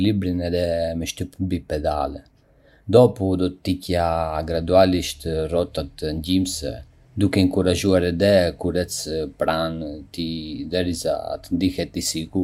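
Speech with a single bit error spike at 7.54 s: one corrupted sample jumps to about -26 dBFS and returns, heard as a sharp tick. It shows as a lone vertical needle on the waveform and a thin full-band line on the spectrogram.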